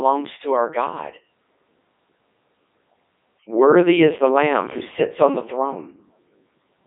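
The speech passes through a Codec 2 vocoder for its whole length, rebuilt from pitch and envelope as sine waves. It sounds robotic and buzzy, limited to about 250 Hz–3.6 kHz.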